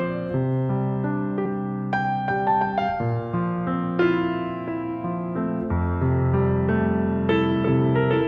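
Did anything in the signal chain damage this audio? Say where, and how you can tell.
Yes, at the codec stage: damaged data in a compressed stream at 1.44 s, a brief glitch as the decoder misreads frames and resyncs.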